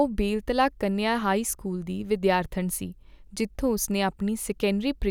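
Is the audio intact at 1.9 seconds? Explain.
Yes, the speech is intact at 1.9 s, with no dropout, click or other fault there.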